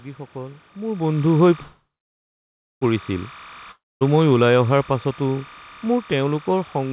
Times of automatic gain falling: 4.27-6.92

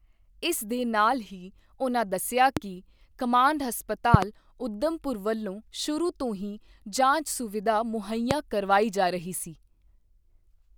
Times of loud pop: 2.57-2.59, 4.14-4.25, 8.31-8.33

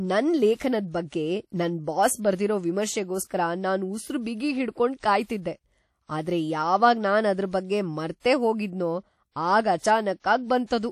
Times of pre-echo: 4.99-5.03, 8.20-8.24

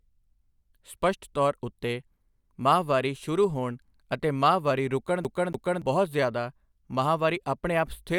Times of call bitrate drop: none

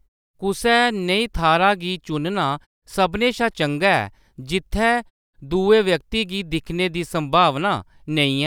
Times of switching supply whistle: none

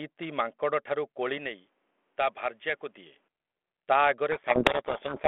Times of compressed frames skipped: none

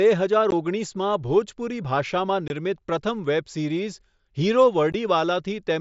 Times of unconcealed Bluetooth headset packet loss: 0.51, 2.48-2.50, 4.92

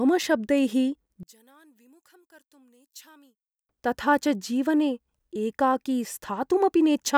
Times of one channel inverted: 1.23-3.69

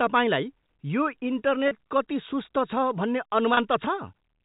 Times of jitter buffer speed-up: none

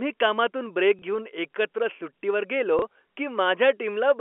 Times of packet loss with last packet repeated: 0.99-1.02, 2.79-2.82

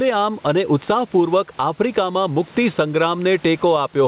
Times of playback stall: none

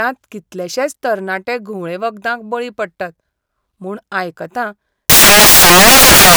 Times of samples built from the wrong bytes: 5.10-6.37

